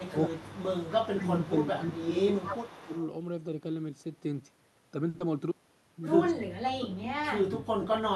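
Echo leak runs from the start to 3.05 s. A faint second copy of the speech trails the original by about 0.24 s, sitting roughly 20 dB below it. The likely cause is a far end playing the call over a loudspeaker, where the echo canceller left part of what its microphone caught. That residue was sent back, so the talker's own voice returns a quarter second late as a ghostly shadow.

Speech suppressed in double talk appears inside that same stretch, as dips at 0.10 to 0.16 s, 0.98 to 1.56 s and 1.77 to 2.93 s. The first is a tiny notch. The next two are longer: about half a second, then about a second of speech pulled down by around 10 to 15 dB. While both ends are active, the echo canceller likely cannot tell the local talker from the returning echo and attenuates everything, so the voice sinks and loses presence in patches.

A short stall from a late packet follows at 5.09 to 5.16 s. A packet arrived about 50 ms behind schedule and the jitter buffer emptied. 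The receiver held the last sound for roughly 50 ms, then resumed where it stopped. Nothing is lost, but one sound lingers unnaturally with a slight buzzy sameness.

Short concealed packet loss comes straight after, at 5.18 to 5.22 s. About 20 ms of audio never reached the decoder, and the receiver patched the gap by extending the preceding sound and blending back in. The result is a quick smear or wobble where a small piece of the speech is simply missing.

Speech suppressed in double talk returns from 6.32 s to the end of the clip, and this time much more severely, with the voice pushed down by something like 30 dB, close to vanishing. Within it, at 6.38 to 6.46 s, the echo leak briefly surfaces again, the same roughly 0.24 s delayed, faint copy slipping through.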